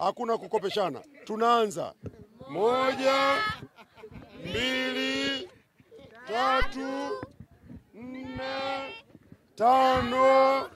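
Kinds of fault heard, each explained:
Phantom power thump: a supply voltage being switched on a live input sends a sudden DC step through the coupling capacitors, which the input passes as a deep low-frequency pulse. Here it lands at about 6.62 s and is over by 6.75 s, peaking at about -17 dBFS and dying away within 30 ms. A waveform shows one lopsided swing that relaxes back to centre, and a spectrogram shows a brief dark smear confined to the lowest bins.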